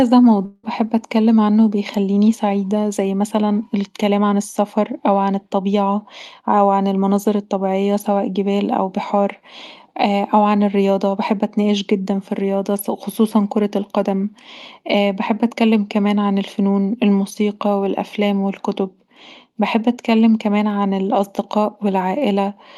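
From 0.45 to 0.65 s, the speech breaks off. The last sound is stretched into a fading buzz for about 180 ms. A brief silence follows, and the audio returns with a stretch missing. A long network dropout is the likely cause, heard through Opus call coding that stops near 12 kHz.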